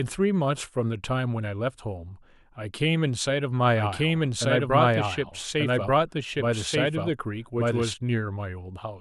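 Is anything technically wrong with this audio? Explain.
Yes. From 3.76 to 7.94 s there is a doubled audio track. A full-band copy of the speech trails about one second behind at roughly equal level, likely captured again by a slower path. It cuts in and out abruptly without decay, and on a spectrogram the same patterns repeat a second later.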